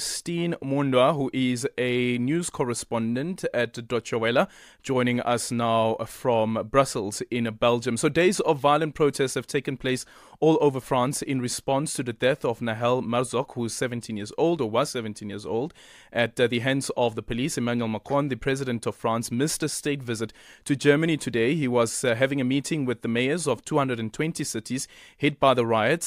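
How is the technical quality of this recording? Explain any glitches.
Nothing glitchy turns up here; the speech comes through steady and even, with no dropouts, clicks or other hiccups to point to.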